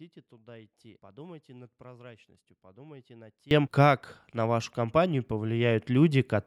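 At 3.51 s, after "над прозрачностью подумайте над", speech and background noise leap up by about 24 dB and stay loud to the end: a sudden gain jump, likely an unramped gain change. The waveform envelope widens in one step, and the spectrogram brightens top to bottom at a sharp vertical edge.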